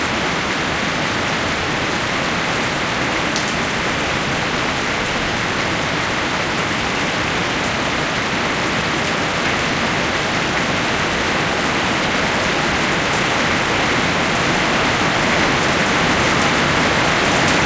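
No faults: the sounds come through a normal G.722 call path at 64 kbps, with the band ending at 8 kHz as that codec dictates.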